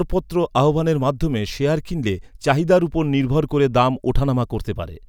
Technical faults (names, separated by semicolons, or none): none